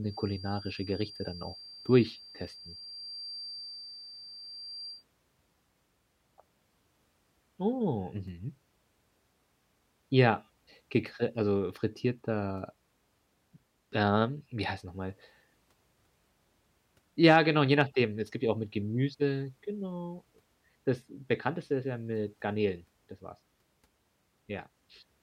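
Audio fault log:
0.0–5.05 s feedback whistle: a thin 4.7 kHz tone that slowly swells and fades sits roughly 15 dB under the speech, likely from a loudspeaker-to-microphone loop held just short of runaway feedback.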